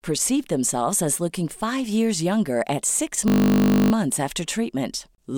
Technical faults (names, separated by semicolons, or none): system hang loop